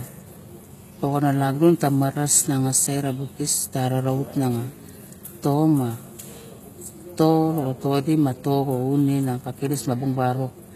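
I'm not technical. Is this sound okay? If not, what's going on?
No. The speech carries plainly audible damage from start to finish. It sounds like HE-AAC compression, likely at a very low setting. This kind of compression keeps only the lower sounds. It then invents the treble by copying lower sounds upward. The copy is bright but not genuine. So the s sounds come out gritty, lispy or metallic. Nothing at all is present above about 14.9 kHz.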